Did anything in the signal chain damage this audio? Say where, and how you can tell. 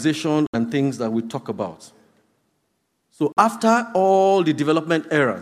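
Yes, two short holes where the sound cuts to silence: one from 0.47 to 0.55 s, losing about 70 ms, and another from 3.32 to 3.38 s, about 46 ms. The edges are abrupt or fade over a few milliseconds, and afterward the audio picks up further along, as if it had kept playing underneath. That's likely a Bluetooth dropout at the wireless playback stage. Packets missed their deadline at the headphones and were thrown away, and the gap lengths fit roughly three and two lost packets.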